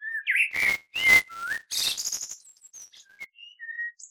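From 0.50 s to 3.25 s, the program filling the playback ring buffer and the hardware draining it have drifted out of step, so their positions cross inside every period. This is buffer tearing: a small sliver of each buffer, a couple of percent, still holds audio from one lap earlier, roughly 10 ms old, with hard seams on both sides. Those seams repeat at 200 Hz, which points to a buffer period of 5 ms, and they lay a continuous robotic buzz over the sound.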